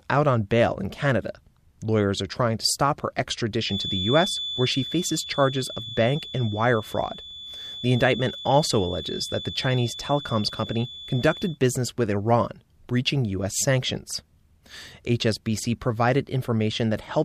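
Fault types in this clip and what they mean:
feedback whistle: a thin, steady 3.5 kHz tone, roughly 10 dB below the speech, swelling and fading slowly in level; likely a loudspeaker-microphone loop held just short of runaway feedback, unlike a howl that keeps rising.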